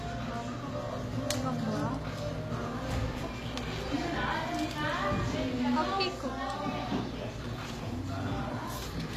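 A recording of everyday sounds whose upper range has a gritty, metallic sheen throughout, with bright detail that never quite matches the body of each sound beneath it. Nothing is present above 14.9 kHz. This is likely HE-AAC compression, with plainly audible damage at a rate that fits roughly 24 kbps. The codec keeps only the lower spectrum and fakes the treble by copying lower bands upward under a coarse envelope, so harmonics fail to line up above the crossover. From 0.95 s to the end, a steady buzz sits underneath, roughly 25 dB below the sound, with a rasping hash above it. Its fundamental is 60 Hz, the field rate of a display. This is video or display buzz: a screen or its video cable coupling electrically into the audio path, so the picture's refresh cycle is heard directly as noise.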